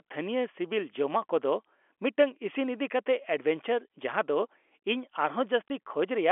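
At 5.68 to 5.70 s, packet loss filled with silence cuts a 20 ms hole in the speech, which fits a single lost packet replaced by nothing. It sounds like a brief, hard-edged dropout. The waveform falls abruptly flat, and the spectrogram shows a thin vertical gap across the 300 Hz to 3.4 kHz telephone band.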